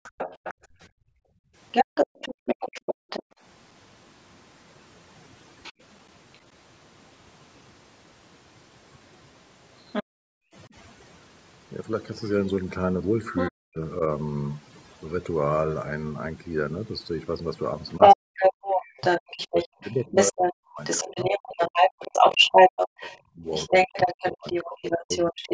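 Speech recording with overdone noise removal applied throughout: the background is pushed down and breaks up into twinkling specks where isolated frequency bands are switched off, and the quieter parts of the voice are stripped along with the noise. The call microphone processing leaves nothing above 8 kHz. A second voice, the other side's voice leaking through, is present from 0.04 to 6.39 s at roughly the same level as the main talker, briefly again from 9.92 to 10.03 s at a similar level, from 13.36 to 13.51 s somewhat below it, and from 17.89 s to the end, where it sits clearly above the talker by around 10 dB. The likely cause is loudspeaker playback that the echo canceller failed to remove from the microphone. Where both voices overlap, the talker's own speech drops out in pieces by up to around 40 dB: briefly between 0.74 and 1.01 s, for a few hundred milliseconds in total between 10.51 and 14.0 s, and for several seconds in total between 17.99 and 25.52 s. 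This is speech suppressed in double talk, likely because the canceller could not tell the talker from the echo and turned both down. Separately, the room sound is cut hard by the echo canceller, with background gating of up to about 40 dB between 1.29 and 3.41 s (roughly 700 ms in total) and from 10.03 to 10.38 s (roughly 400 ms). In each case the background returns once the canceller releases the microphone.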